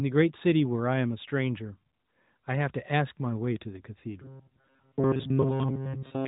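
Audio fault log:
4.22–6.27 s, robotic sound from repeated short buffers: the sound becomes a rigid, metallic buzz at 134 Hz, likely from a chunk of about 7.5 ms being replayed over and over while fresh audio arrived too late, so most of the real signal was skipped.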